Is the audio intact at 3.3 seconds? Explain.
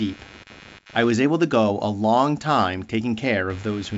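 No, there's computer activity noise running under the speech at 3.3 seconds, just as it does through the whole clip. Processor or graphics load is shaking the shared audio ground, so you hear a buzzy chirp pulsing around a hundred times a second, roughly 25 dB below the speech.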